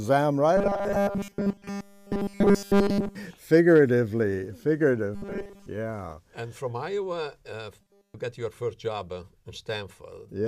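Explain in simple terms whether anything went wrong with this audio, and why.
Something did go wrong: there's robotic sound from repeated short buffers in three spots, from 0.57 to 3.15 s, from 5.15 to 5.69 s, and from 7.81 to 8.15 s. In each, the audio turns into a stiff, metallic buzz at 200 Hz. The likely cause is audio arriving too slowly, so the playback keeps looping a tiny 5 ms slice, which sets that buzz pitch. The first and last stretches are buzz throughout; the middle one is mostly buzz.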